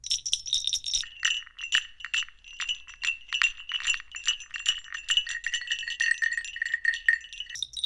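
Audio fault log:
1.03–7.55 s wrong sample rate: the sound runs at half speed and drops a full octave (12 semitones), consistent with 48 kHz material played back at 24 kHz. Unlike a pitch shift or time stretch, pitch and tempo fall together by the same ratio.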